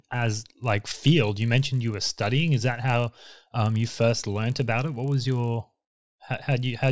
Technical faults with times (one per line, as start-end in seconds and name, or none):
0.00-6.91 resampler restarted on every block